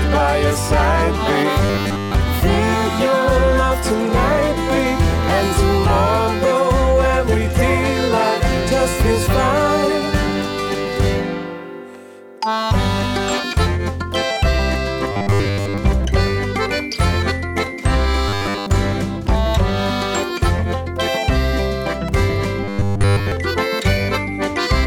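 Four stretches of the audio collapse into a rigid, metallic buzz pitched at 100 Hz: 1.65 to 2.14 s, 15.12 to 15.78 s, 18.29 to 18.67 s, and 22.64 to 23.32 s. This is robotic sound from repeated short buffers, likely caused by audio arriving too late and a roughly 10 ms slice being looped to fill the gap. Most of the real signal is skipped in the first two stretches, and nearly all of it in the last two.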